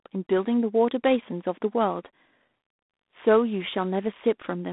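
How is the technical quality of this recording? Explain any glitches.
Quality is limited by telephone-grade coding that runs through the whole clip. The G.726 ADPCM coding is plainly audible from start to finish. Each sample is coded as a few bits of difference from a running prediction, and the coarse steps, which fit the 24 kbit/s rate, leave a harsh, rasping hiss riding on the speech. Unlike steady background noise, it rises and falls with the speech level. The band runs roughly 200 Hz to 3.6 kHz, with nothing above 3.8 kHz.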